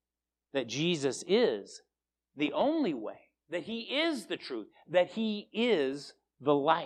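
From 0.39 s to 5.93 s the speech carries a regular tick, a click that returns about every 1.11 s, roughly seven times in all, each one landing wherever the sound happens to be. The steady spacing points to clock drift buffer slips. Two devices likely run on separate clocks that disagree by something like 150 ppm, so the buffer between them creeps until a handful of samples is dropped or repeated, breaking the waveform with a click at each slip.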